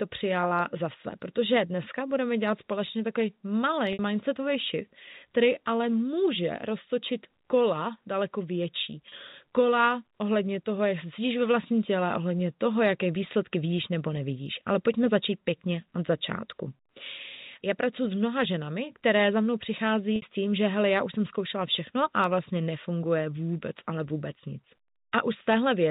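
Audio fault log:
3.93–3.99 s, 9.09–9.12 s, 20.16–20.22 s: packet loss with pitch repetition. Audio went missing for 60, 30 and 60 ms, fitting whole 30 ms packets, and the receiver filled each gap by repeating the last pitch period. The result is a brief held, buzzy tone before speech resumes through a short cross-fade.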